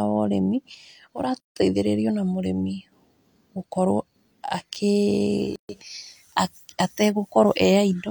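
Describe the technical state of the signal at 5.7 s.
Right at 5.7 s you're just coming out of a gap at a join of encoded pieces: about 133 ms of silence from 5.56 to 5.69 s, where separately encoded chunks were butted together untrimmed. Encoder start delay and last-frame padding leave a hole with smeared edges, and then the speech resumes where it stopped. The joins recur every 4 s.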